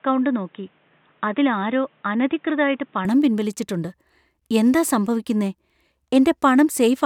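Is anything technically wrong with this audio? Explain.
Yes. From 0.0 to 3.05 s the speech is band-limited, with nothing above 3.8 kHz, so it sounds dull and boxy before opening up abruptly at 3.05 s with no gap. This points to an input switched to a poorer device, likely a secondary microphone or a headset call profile, which passes a narrower band. During that stretch the level sits roughly 5 dB lower, and the device adds its own background noise, around 40 dB below the speech.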